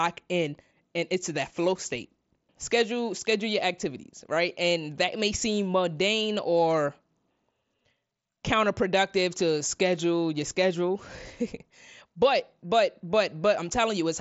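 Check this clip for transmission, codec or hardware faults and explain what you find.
Nothing faulty detected here.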